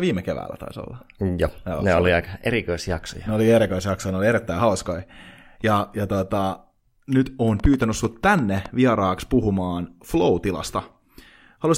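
Likely interference from nearby equipment or a faulty connection or power supply injects a train of clicks from 7.60 to 8.67 s, after "ja tota nyt on" and before "vieraaksi puhumaan": around ten similar pops at about 8.5 per second, unevenly spaced, peaking about 5 dB above the speech.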